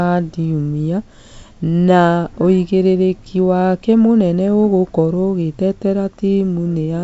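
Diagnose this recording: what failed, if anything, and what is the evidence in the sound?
Nothing failed, and the sound carries no evidence of any fault.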